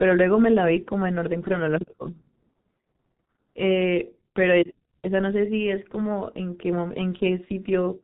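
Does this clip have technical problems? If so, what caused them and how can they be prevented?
Yes. G.723.1 codec damage runs throughout: the speech is muffled and hoarse, with nothing above 4 kHz and consonants smeared by slow, 30 ms frame updates at around 6.3 kbit/s. A wideband codec with higher bitrate prevents it.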